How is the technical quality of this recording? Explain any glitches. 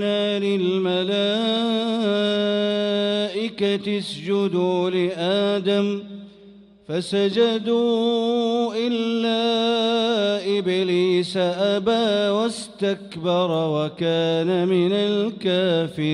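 No glitches or technical faults can be heard anywhere.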